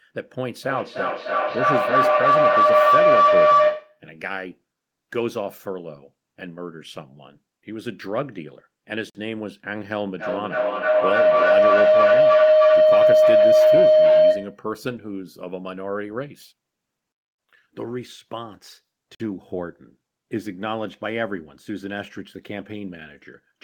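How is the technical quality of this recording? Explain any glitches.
The recording has two recurring faults: feedback howl and gaps between chunks.

From 0.63 to 4.04 s and again from 10.19 to 14.67 s there is feedback howl. The microphone picks up a loudspeaker playing the same call and the loop gains level on each pass, so it narrows to a tone around 700 Hz, pulsing roughly every 300 ms and peaking about 12 dB above the speech.

From 9.10 to 9.15 s and from 19.15 to 19.20 s there are gaps between chunks. The audio appears to arrive in 10-second blocks, and each join leaves 50 ms of silence, heard as a brief dropout at the same point in every block.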